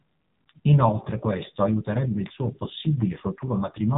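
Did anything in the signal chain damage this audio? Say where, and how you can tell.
Yes, at the codec stage, across the whole clip. The speech has nothing above 4 kHz, and the voice sounds heavily buzzy and synthetic, which fits the AMR narrowband mobile codec at a low mode near 5.9 kbps. Its pulse-driven vocal-tract model is rebuilding the speech from very few bits.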